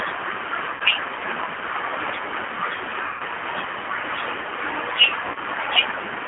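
Throughout, the speech carries G.729 codec damage that is plainly audible. The band is held to 300 Hz–3.4 kHz, and the voice sounds rough and faintly synthetic because it is rebuilt from a filter, a pitch predictor and sparse pulses. This points to an 8 kbit/s G.729A stream, not simple telephone band-limiting.

At 0.74–0.82 s, 3.06–3.22 s and 5.28–5.38 s, VoIP packet loss concealed by the speech codec stretches the preceding sound into a buzzy tone or coloured noise that fades, over about 60, 140 and 70 ms of missing audio. The last of these is broken into scattered gaps. Unlike a plain dropout, the gap is filled with extrapolated sound, and the voice stays weak briefly afterward.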